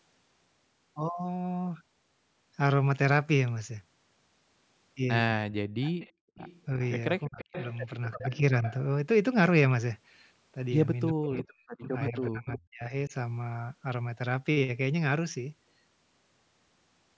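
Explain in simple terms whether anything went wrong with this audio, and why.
Several things went wrong, all from the call's echo handling. The speech is cut down in four places: briefly at 5.45–5.64 s, at 6.77–7.39 s, slightly at 8.16–8.42 s, and over much of 11.14–13.13 s, where it almost vanishes. This is likely speech suppressed in double talk. The other side was talking too, and the echo canceller turned down both this talker and the echo. The tell is that the talker's own voice dips, rather than something being added.

There is also an echo leak, likely from a loudspeaker whose echo wasn't fully removed. From 5.81 to 8.74 s, and again from 11.37 to 12.59 s, a copy of the voice trails about a third of a second behind. Unlike the dips, this adds sound: a delayed repeat rather than missing speech.

Finally, background gated by the echo canceller: at 6.12–6.35 s the room's background noise drops out for a moment and then returns. 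Here it's the quiet surroundings that disappear, not the voice, which separates it from the double-talk dips.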